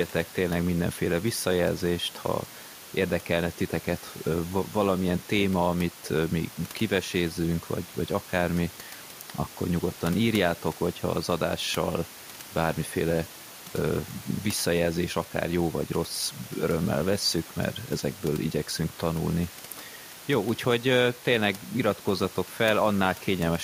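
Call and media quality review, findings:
Nothing stood out on listening to the speech recording, and no findings are raised against it.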